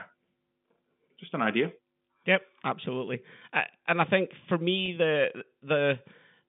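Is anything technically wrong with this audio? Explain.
Yes. Packet loss with pitch repetition occurs from 4.86 to 4.88 s, right after "and I think for". About 20 ms of audio went missing, which fits a single lost packet. The receiver filled the hole by repeating the last pitch period of the speech and fading it out. Because the gap is so short, the result is a brief, slightly held, buzzy sustain rather than a dropout, heard against the narrow telephone band of the G.711 line.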